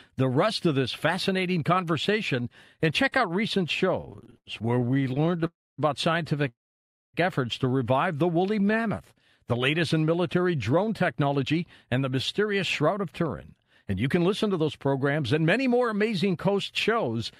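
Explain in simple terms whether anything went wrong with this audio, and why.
Between 4.01 and 5.46 seconds the speech shows repeated stalls (stutter): 36 tiny hitches where the sound briefly holds instead of moving on, the longest about 0.09 seconds. Audio arrived too slowly to play smoothly. The same happens briefly at 8.60 to 8.74 seconds. Unlike a freeze, these are many short catches rather than one clear gap.

Two call audio freezes follow: at 5.46 to 5.80 seconds, fading to silence for about 0.25 seconds, and at 6.48 to 7.16 seconds, silent for about 0.58 seconds. The data was likely held up in transit. Speech then resumes exactly where it stopped, so nothing is lost, only delayed.

From 10.73 to 13.35 seconds and again from 13.85 to 17.32 seconds, a jitter buffer speed-up makes the speech run about 6% fast and sound hurried. Tiny slivers were trimmed out to catch up on the delay, roughly 0.15 and 0.2 seconds in total. 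The pitch stays normal, which is what sets this apart from simply playing the recording faster.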